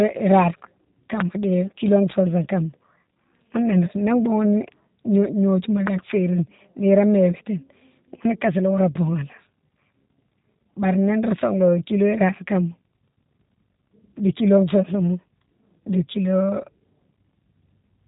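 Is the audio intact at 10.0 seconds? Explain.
No. At 10.0 seconds the speech carries G.729 codec damage, as it does for the whole clip. This 8 kbit/s VoIP coder rebuilds each 10 ms frame from a vocal tract filter, a pitch predictor and a few pulses, so the voice comes out rough and faintly synthetic. Nothing survives above about 3.8 kHz. A plain low-pass filter would only dull the sound, but here the harshness and synthetic texture reveal the model-based resynthesis.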